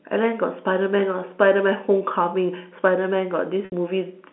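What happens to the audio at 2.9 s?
Nothing goes wrong at 2.9 s; the speech there continues intact, heard through the narrow 200 Hz to 3.4 kHz band of G.711 telephone coding.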